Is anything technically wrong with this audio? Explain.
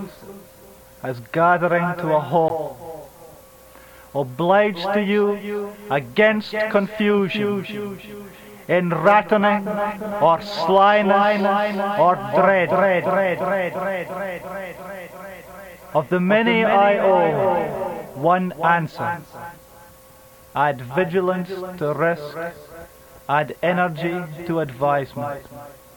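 Yes, there is one fault. At 2.48 s a CD skip occurs. A jolt or disc flaw throws the laser onto another turn of the spiral, so the player mutes for a split second, roughly 15 ms, then resumes elsewhere. It sounds like a tick followed by an abrupt discontinuity. On a waveform it appears as a brief flat gap with mismatched edges, and on a spectrogram as a thin vertical break.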